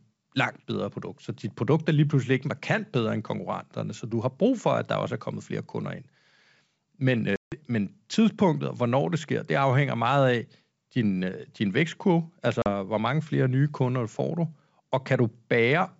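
Packet loss on an ADPCM call hits the speech at 7.36–7.55 s, a 160 ms silent hole from several dropped packets, and again at 12.62–12.68 s, a 40 ms gap. Each hard-edged dropout leaves the decoder's predictor and step size mismatched, so the sound resumes briefly slightly distorted before settling.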